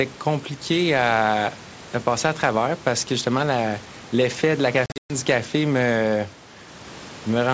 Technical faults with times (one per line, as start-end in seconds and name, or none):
4.86-5.13 packet loss on an ADPCM call